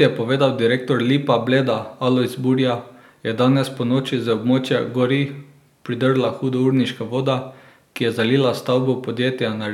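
From 0.78 s, just after "je povedal", to 9.17 s, a click recurs every 1.2 s, about seven in all. These are clock drift buffer slips, likely two clocks about 150 ppm apart, each slip dropping or repeating a few samples.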